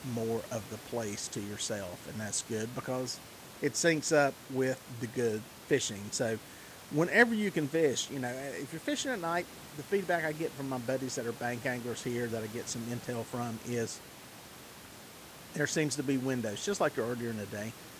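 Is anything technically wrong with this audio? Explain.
No, nothing in this speech recording points to a technical fault, and the only background sound is the room's own noise sitting about 20 dB below the speech, which belongs to the recording space rather than to the system.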